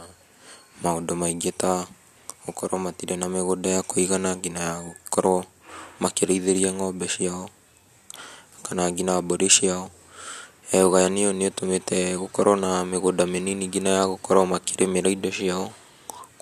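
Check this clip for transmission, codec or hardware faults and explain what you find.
No faults can be heard anywhere in the speech. There is nothing to report for any part of the recording.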